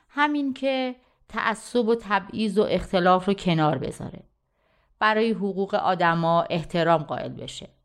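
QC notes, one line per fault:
No faults heard anywhere in this speech recording.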